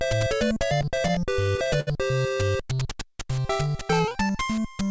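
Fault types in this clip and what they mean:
Repeated stalls (stutter): late packets emptied the jitter buffer twelve times from 0.82 to 1.89 s, so stretched fill-ins make the sound drag and stutter.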